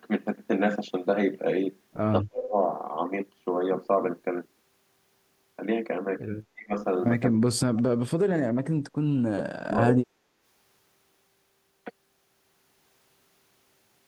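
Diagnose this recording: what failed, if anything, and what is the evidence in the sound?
The speech ducks sharply in five places: 2.22 to 2.56 s, 6.53 to 6.73 s, 7.31 to 7.86 s, 8.07 to 8.42 s and 9.62 to 10.17 s. Each dip lasts a few tenths of a second and falls by roughly 30 to 40 dB before the level recovers. The stage is call processing, likely speech suppressed in double talk. The echo canceller could not tell this talker from the far end's loudspeaker echo while both spoke, so it pulled everything down.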